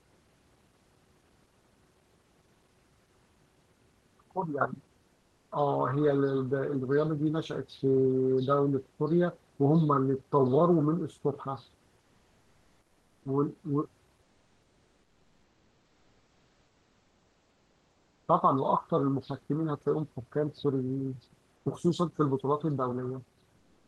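Between 14.22 and 18.28 s, at 21.56 s, and from 23.58 s to the end, comfort noise in place of the background: steady, featureless hiss substitutes the room ambience, level shifted about 1 to 2 dB, likely Opus DTX.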